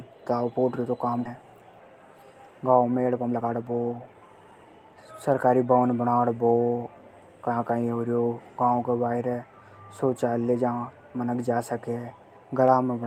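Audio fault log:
1.25–1.27 s, skip ahead: playback jumps forward by about a second of speech with no filler in between, so the material on either side of the jump is joined almost directly. A late stretch of audio was dropped while later audio was already queued, probably discarded by the jitter buffer. The result is an abrupt join with nothing bridging it, and the playout delay shortens by roughly the same amount.
2.98–4.80 s, jitter buffer speed-up: for just under two seconds the speech runs at about 119% of normal speed while the pitch stays the same, so it sounds hurried. The receiver's buffer was holding more audio than its target. To bring the delay down, it repeatedly cut out short pieces one or a few pitch periods long, removing around 0.4 s in total across the stretch.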